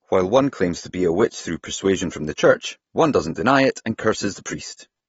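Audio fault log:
Throughout: AAC compression, dull, smeared speech with a fizzy edge on sibilants and nothing above 7.6 kHz, likely from low-bitrate AAC-LC starving the upper bands.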